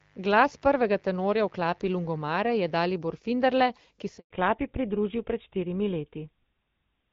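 Mains buzz runs from the start of this speech recording to 2.85 s: a steady, raspy buzz sitting well below the voice. It comes from sharp switching spikes, from a dimmer, a rectifier or an unshielded line, entering the audio twice per cycle of 50 Hz mains, so the interference is a dense stack of 50 Hz harmonics reaching into the kilohertz range rather than a smooth hum, and it stops at 2.85 s. A handover gap follows from 4.18 to 4.30 s, when the voice fades out over a few tens of milliseconds and stays silent until the new link starts, 120 ms in all. The call was being passed from one network to another, no speech frames arrived during the switch, and whatever was said in that window is gone. Fallback to narrowband begins at 4.30 s and lasts to the end. Before it, the wideband AMR-WB (HD Voice) codec carries speech up to about 7 kHz, with a clear sound that fits its 12.65 kbit/s mode. After the new link comes up, nothing above 4 kHz survives, and the voice turns duller and rougher. 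That change points to the call dropping to an older narrowband codec, with GSM full rate the likely one.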